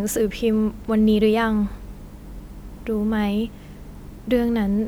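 No faults can be heard anywhere in this speech recording.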